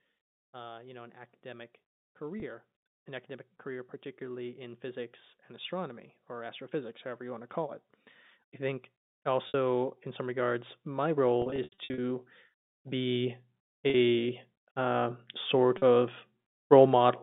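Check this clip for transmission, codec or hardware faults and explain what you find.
Two faults recur throughout the telephone-band speech: gain that keeps creeping upward, and short gaps patched over by repeated pitch.

Automatic gain rising: from 0.51 to 7.58 s, the speech and the background noise slowly swell together by about 11 dB. It happens again from 8.58 to 12.25 s (about 7 dB) and from 12.83 to 16.05 s (about 5 dB). An automatic gain control judged the input too quiet and raised its gain gradually, which lifts everything in the signal, noise included.

Packet loss with pitch repetition: there are brief buzzy holds at 2.40 s (20 ms), 13.90 s (40 ms) and 15.78 s (40 ms), and at 9.48 s a 60 ms loss that fades toward silence. Between 11.42 and 11.98 s, about 300 ms of losses are scattered across 560 ms, with the longest single gap lasting 80 ms, so that stretch stutters and dips toward silence. 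The receiver filled each missing stretch by repeating the last pitch period and fading it out. The gap lengths fit 20 ms packets. The G.711 line band itself, roughly 150 Hz to 3.7 kHz, sounds as expected.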